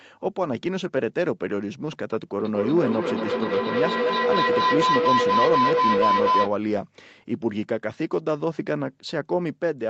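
Feedback howl runs from 2.40 to 6.55 s in this speech clip. Two devices sharing a room and a call form a loop from loudspeaker back into microphone that gains on each pass, so the repeats swell rather than fade and narrow to a tone around 1 kHz. The loop's round-trip delay is roughly a fifth of a second, and the howl peaks at about 4 dB above the speech before it breaks off.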